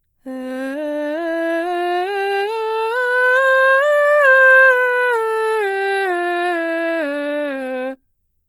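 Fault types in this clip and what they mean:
Opus compression: the music sounds grainy throughout, tones turned noisy and rough, likely from Opus band filling at a low bitrate near 24 kbps, with content still reaching 20.2 kHz.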